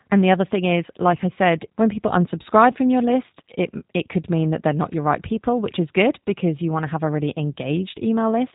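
Speech passed through a G.729 codec throughout: nothing above 3.8 kHz, with a plainly rough, synthetic texture consistent with 8 kbit/s pulse-based reconstruction.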